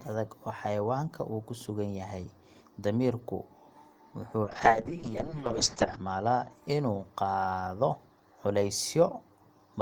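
From 4.45 to 6.57 s, a call bitrate drop: the bandwidth estimate collapsed and the encoder was starved of bits, consistent with a fall from about 32 to 6 kbps. The speech turns rough and muffled, its top end cut from 20 kHz to 8 kHz for 1.52 s.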